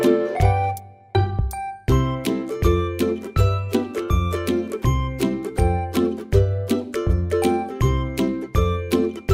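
Nothing stood out on listening; no technical problem could be heard anywhere in the recording.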